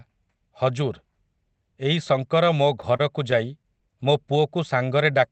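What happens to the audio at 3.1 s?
Brief ticks, small smears and hiccups break into the speech here, part of a run of scattered short gaps from 2.81 to 3.83 s. About seven packets went missing or arrived late, none much beyond 30 ms, and the receiver concealed each hole by stretching the preceding sound.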